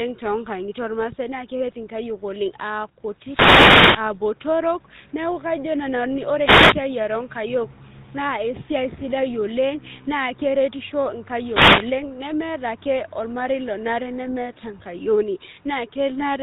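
GSM full-rate codec damage runs through the whole speech clip. The codec rebuilds the voice from a vocal-tract filter driven by a sparse pulse train that keeps only one in three excitation samples, so voiced sounds turn buzzy and gravelly. The damage is plainly audible, and the band stops at 3.8 kHz, taking away the air and sibilant detail. The sound fits a 13 kbps full-rate GSM encoding.

Wireless microphone noise hits come at 3.17 to 4.18 s, 6.41 to 6.78 s and 11.32 to 12.01 s, the last just before "nemeeta ake ormarei lonare". In each one the FM radio signal from the microphone fades as reflected paths cancel. Receiver noise then rises, heard as a swish or burst of static. The first hit lasts about a second, and the third about 0.7 s.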